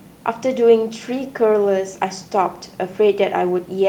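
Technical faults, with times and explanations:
No technical faults can be heard in this clip.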